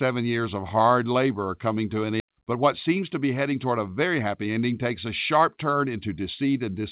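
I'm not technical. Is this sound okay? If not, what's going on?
No. There are two problems, both close together.

At 2.2 seconds there is a skip ahead. Part of the audio, roughly two-thirds of a second, never reaches playback, so the sound jumps straight from before the gap to after it with no pause. It happened because a chunk of audio was lost on the way or dropped by the system when its buffer overflowed. The missing piece cannot be recovered from the recording.

From 2.30 to about 6.2 seconds there is a jitter buffer speed-up. After the backlog, the receiving end still held more audio than it wanted. It trimmed many tiny slivers, each only a few thousandths of a second, until about a third of a second was gone in total. The result plays roughly 9% faster at the same pitch, so that stretch sounds hurried.

The underlying call connection carries only telephone-band sound, with nothing above 4 kHz, so it sounds like a phone call throughout.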